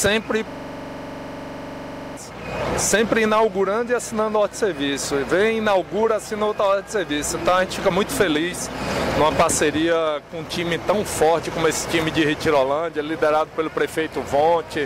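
From 0.51 to 2.17 s the audio freezes into a rapid, rattling stutter. A 42.67 ms fragment repeats about 39 times at 23.4 Hz. This is a system hang loop: the system stalled while the sound hardware kept replaying one ring buffer, which fits a 2048-sample buffer.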